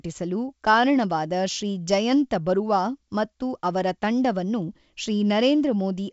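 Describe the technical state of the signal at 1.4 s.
At 1.4 s the audio is intact, with the speech carried cleanly through the G.722 wideband telephone coding at 64 kbit/s.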